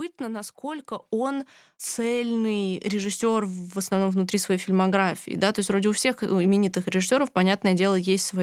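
At 1.02 s the microphone volume is stepped up by about 6 dB, and again at 3.06 s by about 2 dB. The input level is raised in a single jump, so voice and background noise get louder together, unlike a talker simply speaking up.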